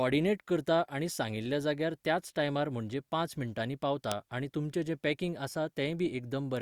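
A speech clip with one electrical switching spike at 4.12 s: a single sharp snap laid over the speech, peaking around -10 dBFS. It is likely a nearby switch or static discharge arcing into the audio line. The waveform shows a needle-thin spike, and the spectrogram shows a narrow vertical broadband stripe.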